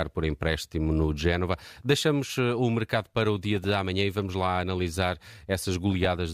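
DAB burbling appears at 0.59 s, from 3.56 to 3.71 s between "mercado para o dia" and "amanhã e vamos lá", and from 5.92 to 6.06 s. Residual bit errors corrupt MP2 sub-band samples, producing short noise blips in single sub-bands; spectrograms show isolated blocky band flare-ups frame by frame.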